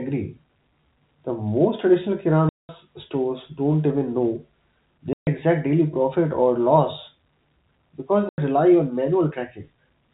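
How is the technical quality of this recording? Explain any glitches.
Three dropouts break up the speech, each a case of packet loss filled with silence. The first runs from 2.49 to 2.69 s (200 ms) right after "most traditional". The second, 5.13 to 5.27 s (140 ms), comes just before "exact daily profit or". The third, 8.29 to 8.38 s (90 ms), comes just before "rely on". Each gap is a multiple of 10 ms, which fits 10 ms packets going missing and the receiver inserting silence in their place. The cuts are abrupt, with hard edges. On a waveform they show as flat near-silent stretches with squared-off boundaries, and on a spectrogram as blank vertical bands. Behind this, the G.711 telephone coding gives the band-limited sound of an ordinary phone line, with nothing above 4 kHz.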